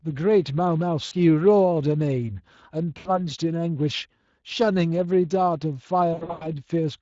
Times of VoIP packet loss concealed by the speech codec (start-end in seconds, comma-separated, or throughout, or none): 1.05-1.13, 2.97-3.10, 6.13-6.47